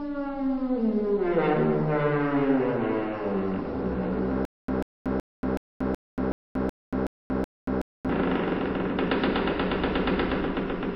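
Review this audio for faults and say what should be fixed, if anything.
Stutter with silent gaps from 4.45 to 8.09 s. A 141 ms fragment repeats nine times, every 374 ms, with 233 ms of silence between. A stalled stream or player is the likely cause. Larger buffering and faster recovery from stalls would prevent it.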